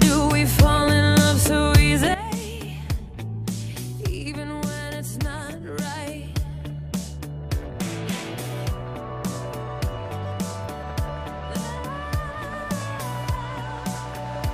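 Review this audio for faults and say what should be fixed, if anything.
At 2.14 s the level drops abruptly by about 12 dB and stays there until the end, a sudden gain jump. The likely cause is a digital gain change, such as a setting or bit shift, applied between one sample and the next with no ramp, so the sound and its background noise fall together. On a waveform the envelope steps down sharply at that instant; on a spectrogram every frequency band dims at once along a vertical line. Gain changes should be smoothed over a short ramp instead of being switched instantly.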